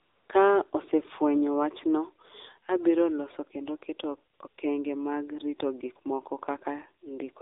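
AMR narrowband mobile codec damage runs through the whole of this speech recording. The band is confined to roughly 300 Hz to 3.7 kHz, and the voice has a plainly buzzy, synthetic edge that fits a low AMR-NB mode around 7.4 kbps, where few pulses per subframe drive the vocal-tract model. AMR comfort noise appears from 0.00 to 0.30 s and again, just after "abiro loso kendo keto", from 4.34 to 4.40 s and 4.48 to 4.58 s. In these spots the phone stopped sending speech frames and the receiver substituted smooth generated noise, which switches in and out.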